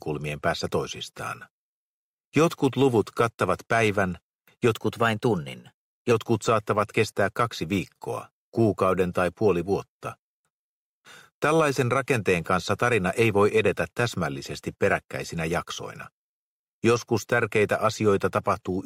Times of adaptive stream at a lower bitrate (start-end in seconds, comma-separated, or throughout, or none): none